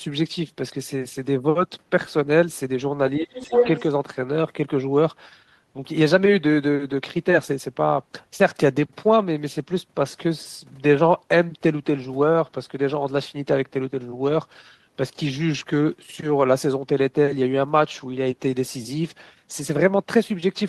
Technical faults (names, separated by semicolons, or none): speech suppressed in double talk; other side's voice leaking through